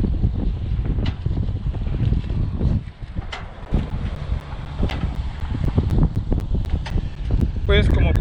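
Periodic USB or driver dropouts, 3.65 s to 8.17 s: every 0.25 s a stalled bus or driver silences roughly 10 ms, producing regular ticks.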